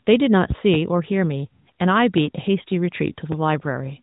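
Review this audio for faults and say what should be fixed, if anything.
Loud pop: a sudden voltage step, likely from a plug, switch or static discharge, hit the chain. It causes a double pop between 0.50 and 0.77 s and a single pop at 2.18 to 2.21 s, each peaking about 15 dB above the speech, which continues underneath. Secure connectors, avoid switching during recording, and ground equipment against static to prevent it.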